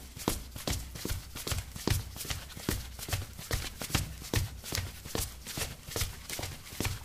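Listening through this recording of sounds, nothing stood out as a technical problem.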